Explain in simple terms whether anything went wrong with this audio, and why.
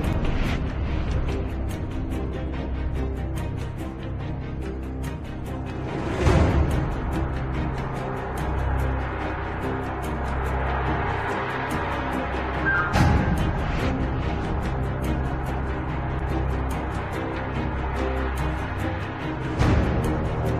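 Nothing went wrong; no problems can be heard here.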